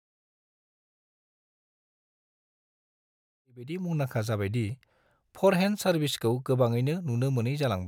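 Nothing goes wrong in this bit of speech; the one change in level is a gentle fade-in, the kind an editor would add, that rises from around three and a half seconds and reaches full level at 4.09 s with no click or hard edge.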